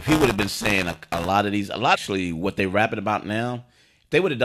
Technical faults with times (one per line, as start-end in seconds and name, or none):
0.00-1.29 buffer tearing
1.94-1.96 stream segment skipped